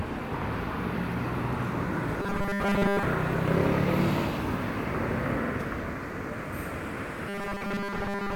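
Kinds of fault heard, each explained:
Robotic sound from repeated short buffers: from 2.22 to 3.03 s, and again from 7.29 s to the end, the sound becomes a rigid, metallic buzz at 200 Hz. The likely cause is audio arriving too seldom, so a 5 ms slice is looped to fill the gaps while most of the real sound is skipped.
Repeated frames: at 5.46 s there is a brief stutter, as a 46.4 ms stretch plays twice. That fits two compressed frames being written or sent again, so the decoder repeats them and the audio runs 46.4 ms longer.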